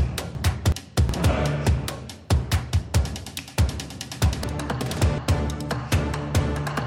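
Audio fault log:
0.35–1.10 s and 4.44–5.18 s, frames out of order: in each stretch two adjacent blocks of about 0.37 s play in swapped order, the later block first, which fits two runs of four frames exchanged before decoding. The sound turns into a garbled flutter as the material jumps ahead and then back. Nothing is lost or added, so the timing after each stretch stays intact.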